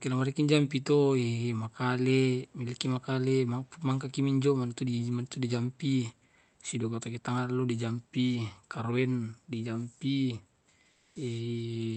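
From 10.91 to 11.15 s, a stretch of 240 ms, the room background gives way to comfort noise in place of the background. That background sits about 43 dB below the loud speech. During the gap the real room texture is replaced by a steady, featureless noise whose level shifts by about 2 dB. The likely cause is Opus discontinuous transmission, with the receiver synthesising noise while the sender pauses. The call path's audio band ends near 8 kHz.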